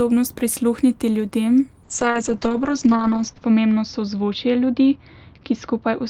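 From 1.87 s to the end of the clip, a call bitrate drop occurs. The connection's bandwidth estimate fell, so the encoder coarsened its coding, consistent with a fall from about 32 kbps to roughly 7 kbps. The audio band shrinks from 20 kHz to 8 kHz, removing the airy top end, and the speech turns muffled, rough and watery. The worst stretch lasts about 1.58 s, and quality never returns before the clip ends.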